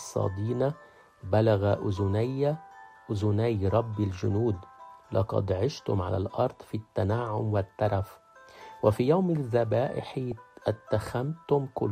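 The audio carries a brief DAB burbling blip at 10.31 s, heard as a few watery blips over the programme. It points to a handful of corrupted MP2 frames, where a low bit error rate of around a tenth of a percent slipped past error correction and scrambled samples or scale factors. On a spectrogram it would appear as isolated bright or dark blocks confined to narrow sub-band strips, with only a brief irregularity visible in the waveform.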